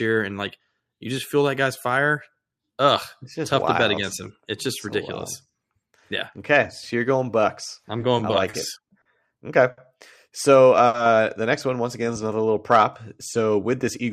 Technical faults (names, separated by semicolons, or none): repeated stalls (stutter); short stall from a late packet; jitter buffer slow-down